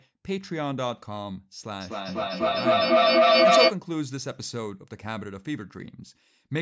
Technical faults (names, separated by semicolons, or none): feedback howl